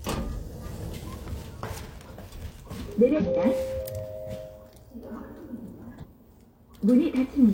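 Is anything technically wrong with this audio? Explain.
Yes. Damaged data in a compressed stream occurs three times: 0.61 to 0.65 s, 3.12 to 3.22 s, and 5.99 to 6.05 s. At each point part of the encoded data is corrupt, so the decoder misreads those frames, loses its place in the bitstream and hunts for the next valid frame header before playback resumes. Each instance is a brief chirp or blip lasting roughly 40 to 100 ms.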